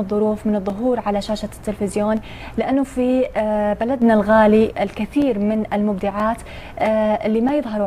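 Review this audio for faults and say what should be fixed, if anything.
There's a sudden gain jump from 4.02 to 4.69 s: sound and background noise leap up together by about 6 dB, likely a gain setting applied instantly without a ramp. To prevent it, smooth every gain change over a few milliseconds.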